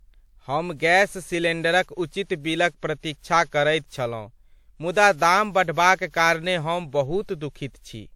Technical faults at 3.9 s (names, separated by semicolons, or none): generation loss